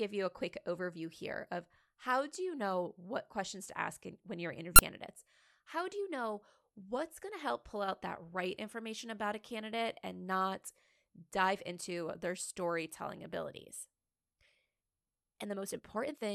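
A speech clip with a time-stretched section from 14.31 s to the end at 16.35 s: the pace jumps to about 1.46 times normal speed while pitch holds steady, sounding rushed, likely from software dropping short segments to shorten the audio.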